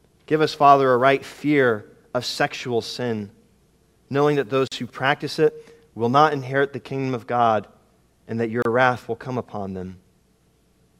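At 4.68 to 4.72 s and again at 8.62 to 8.65 s the sound drops out for about 41 ms and 30 ms, a gap at a join of encoded pieces. Separately encoded segments were butted together untrimmed, so encoder delay and final-frame padding leave brief silences with smeared edges before the sound resumes where it stopped.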